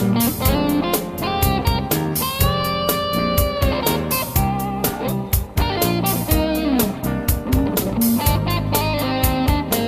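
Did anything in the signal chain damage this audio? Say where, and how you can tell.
No, I can't hear damage from any stage.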